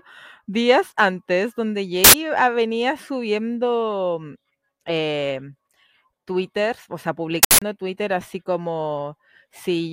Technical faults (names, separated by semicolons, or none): uninitialised buffer